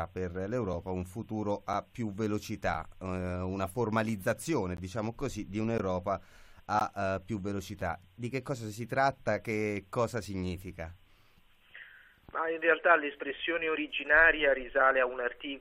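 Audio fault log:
0.73, 1.73, 2.74, 4.77, 5.78, 6.79 and 7.81 s, gap between stream segments: brief hard-edged dropouts of about 4 to 16 ms recur roughly once a second. Timestamps of consecutive 1-second segments leave small holes, which the player fills with silence. No audio is lost.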